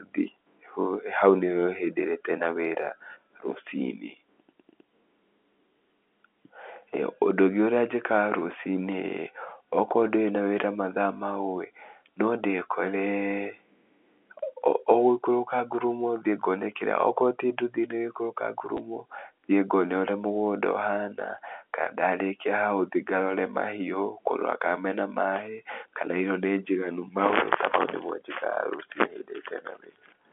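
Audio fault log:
18.77 s, packet loss with last packet repeated: a 10 ms gap got filled by replaying the previous chunk. The replay probably doesn't line up with the pitch, so the repeat makes a small blip, which fits a single lost packet under the telephone-band G.711 coding.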